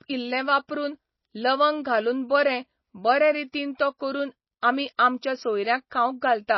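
Throughout the speech, nothing survives above 5.8 kHz, and the remaining detail sounds watery and swirling, with s sounds chirping metallically. That points to MP3 compression, likely at a very low bitrate near 24 kbps. The flickering artefacts distinguish it from a plain low-pass filter.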